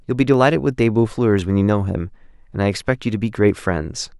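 From 0.34 s to 3.49 s the speech carries a regular click, recurring every 1.05 s, about four times in all. These are clock drift buffer slips: the capture and playback sides likely run on independent clocks differing by something like 150 ppm, so the buffer between them slowly drifts until a few samples at a time are dropped or repeated. Each slip breaks the waveform briefly and is heard as a click.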